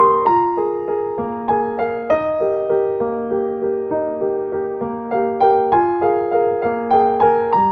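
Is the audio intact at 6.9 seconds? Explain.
Yes, the audio at 6.9 seconds is intact, with no dropout, glitch or other fault at that moment, only the steady band-limited character of the call codec it passed through.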